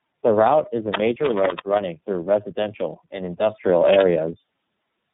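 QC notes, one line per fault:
Throughout: tandem speech coding. The speech went through three separate low-rate speech coders in a row, with G.711 links between them. Each coder re-encoded the previous one's decoded output, so the errors stacked up into rough, warbly, muffled speech with nothing above 3.8 kHz.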